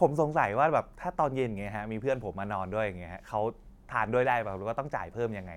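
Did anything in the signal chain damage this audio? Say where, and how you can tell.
No, nothing along the signal chain has left an audible mark on this speech recording, and the signal stays intact and continuous throughout.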